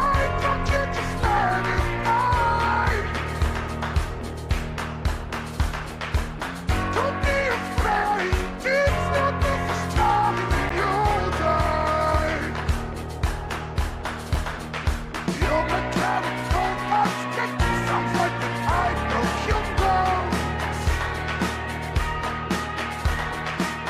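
The audio has two blocks of digital silence, at 10.69 s and 14.34 s. In each, the signal drops straight to silence and returns with no fade, and each is heard as a short tick. The first gap lasts about 11.6 ms, which fits a 512-sample buffer. The second lasts about 5.8 ms, which fits 256 samples. Both point to the output buffer not being filled in time.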